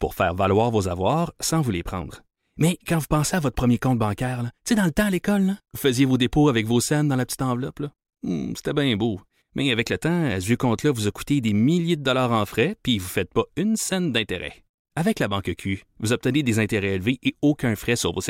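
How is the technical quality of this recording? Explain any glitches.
No technical faults are audible in this speech recording, so there are no glitches to explain.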